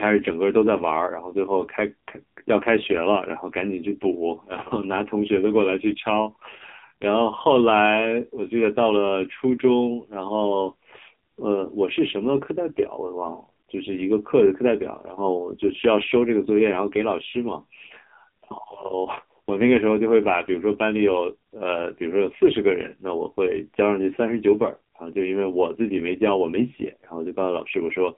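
Throughout the speech, the AMR narrowband mobile codec is audible: a 200 Hz to 3.7 kHz line with nothing above 3.8 kHz, plus heavy buzzy, synthetic colouring that fits a low 5.9 kbps rate. That artificial buzz, not just missing treble, separates it from a plain band-limiting filter.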